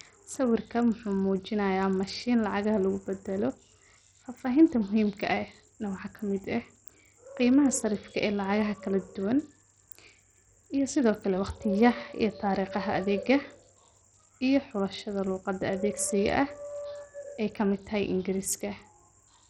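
Throughout the speech, treble flickers and drops out, with gritty noise and aliasing. This is heavy Bluetooth SBC compression, likely from a starved bitrate near 64 kbps.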